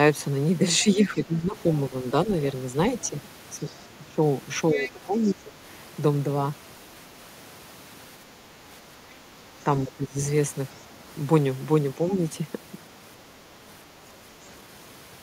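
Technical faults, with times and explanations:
0.84–1.56 s, 4.0–4.2 s, 4.74–5.14 s, 5.33–5.56 s and 9.84–10.18 s, speech suppressed in double talk: the speech itself sinks by roughly 10 to 15 dB for a few hundred milliseconds. This is likely an echo canceller treating simultaneous talk as echo and ducking everything. Unlike leakage, nothing foreign is added; the main speech loses level instead.
2.98–3.09 s, 4.72–4.9 s and 5.25–5.31 s, other side's voice leaking through: brief scraps of a second voice sit under the speech, very faint at about 30 dB down, but closer to about 10 dB down near 4.8 s. This is likely residual loudspeaker echo the canceller missed. It adds sound rather than removing it.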